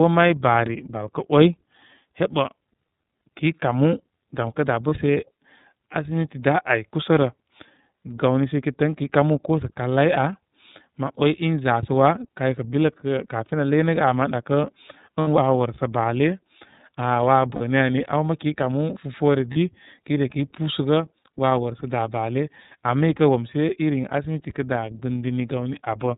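From start to end the speech carries iLBC codec coloration. Nothing above 4 kHz survives, and voiced sounds have a slightly rough, synthetic edge. The band-limiting and roughness are plainly audible and fit the 30 ms, 13.33 kbps mode. The texture separates it from plain telephone band-limiting, which cuts the top but leaves the voice smooth. Here the excitation itself is coarsely coded in independent 30 ms blocks, so the grain sits inside the voice rather than just dulling it.

Lost iLBC frames break in four times: from 4.88 to 4.92 s, just after "kə da'"; from 15.21 to 15.28 s; from 17.55 to 17.61 s; and from 19.53 to 19.57 s, just before "kəy ne kəy". The first and last fit a single missing 30 ms frame, and the middle two fit two frames, about 60 ms. In each gap the decoder repeats the last pitch cycle blended with noise, so the gap sounds like a briefly held, buzzy vowel. A true dropout would go silent, and a stutter would replay a whole chunk of sound. 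Because each iLBC frame decodes on its own, the voice snaps back almost at once after each gap, with no smeared recovery.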